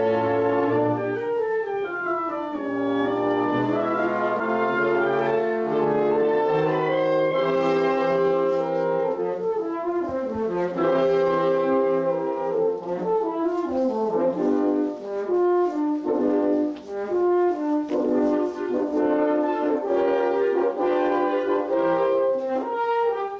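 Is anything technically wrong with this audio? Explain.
Yes. At 4.40 s the audio jumps abruptly forward, with roughly 0.7 s of material simply gone and the two sides butted together with no gap or fill. This is a skip ahead: a stretch of audio was dropped, either on the way or by the jitter buffer when it overflowed, while newer audio was already queued, so playback jumped ahead, cutting the delay by about the same 0.7 s. Anything that fell in that window never plays.

From 6.89 s to 8.52 s the sound runs noticeably hurried, about 6% fast, yet its pitch stays where it was. That is a jitter buffer speed-up: the buffer was holding more audio than its target, so the receiver repeatedly snipped out short slices one or a few pitch periods long, removing around a tenth of a second in total. Because whole periods are cut rather than the audio being resampled, timing tightens without any change in pitch.

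The audio also passed through a call path whose G.722 coding leaves nothing above 8 kHz.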